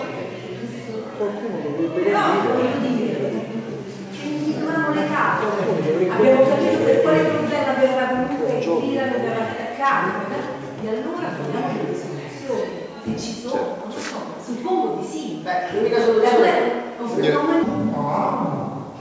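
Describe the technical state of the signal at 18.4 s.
At 18.4 s the signal has a wrong sample rate fault, from 17.63 s to the end. Everything slows to two-thirds speed and drops about seven semitones. That fits 24 kHz audio played back at 16 kHz.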